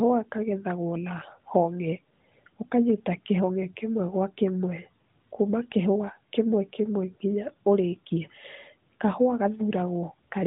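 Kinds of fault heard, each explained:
No faults can be heard in this speech.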